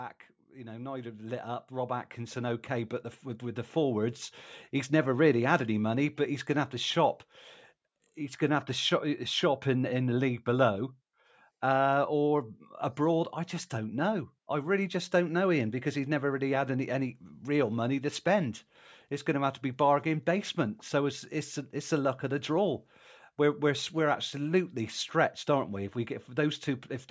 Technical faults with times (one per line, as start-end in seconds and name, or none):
0.52-9.32 automatic gain rising